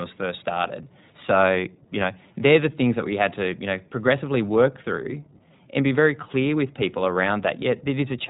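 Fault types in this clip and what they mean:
iLBC codec: a narrowband VoIP codec coding each 20 ms frame on its own, so the speech sounds rough and synthetic, with nothing above 3.8 kHz.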